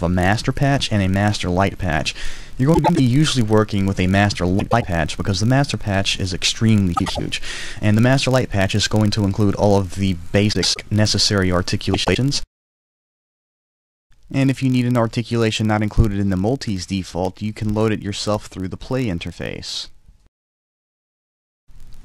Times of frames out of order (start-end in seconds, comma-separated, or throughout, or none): 2.74-3.00, 4.60-4.84, 6.95-7.20, 10.52-10.78, 11.93-12.17